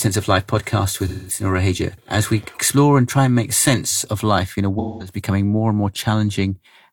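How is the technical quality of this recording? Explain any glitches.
The speech has two brief dropouts. From 1.07 to 1.44 s, and again from 4.79 to 5.19 s between "of life in a" and "more and more", the sound turns smeared and phasey. This is AAC frame loss with concealment: the decoder rebuilt the missing audio from the last good spectrum, in a way that fits about five lost frames, or roughly 213 ms.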